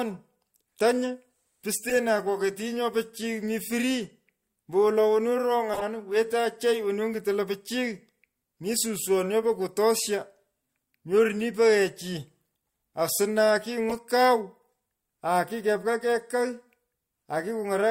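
At 1.89–1.95 s, 5.73–5.83 s and 13.89–13.96 s, the speech carries a corrupt frame decoded. Flipped bits made the decoder misplace energy across a few frames, producing brief squeaky bursts peaking around -15 dBFS. These show as bright, stray spectrogram patches and jagged waveform spikes.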